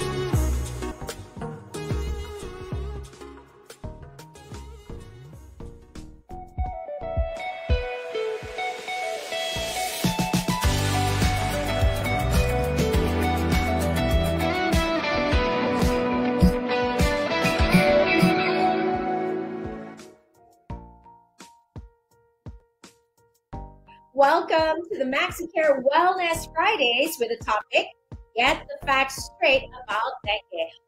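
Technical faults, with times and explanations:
0.91 s, compressed frames skipped: the sound jumps ahead about 200 ms, consistent with several dropped 32 ms codec frames.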